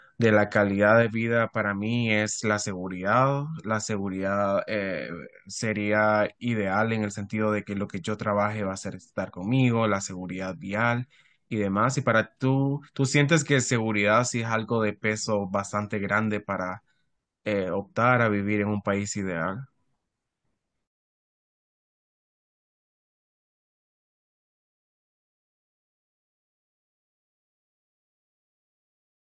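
A speech recording, and there's honestly nothing technically wrong to flag here; nothing goes amiss at any point along the way.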